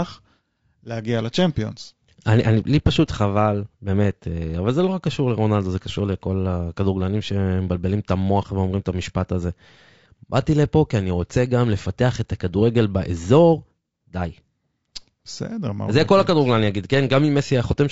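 From start to finish the speech sounds rough and grainy, with noise between harmonics. This is likely low-delay AAC compression, fitting roughly 32 kbps.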